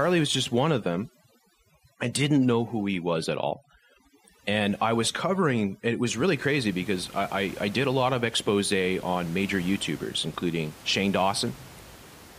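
From 0.0 to 6.06 s there is overdone noise removal. Aggressive noise reduction cuts frequency bands near its noise estimate almost to nothing. Quiet parts of the speech vanish with them. The background drops and breaks up into twinkling specks. The room noise, about 22 dB below the speech, is part of the recording.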